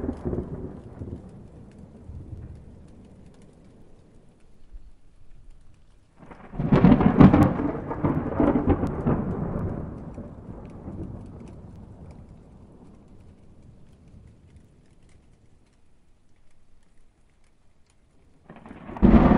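From 0.21 s to 18.97 s there are word clock ticks, sharp clicks roughly every 0.7 s, about thirty in all, as two unlocked clocks slip one sample apart.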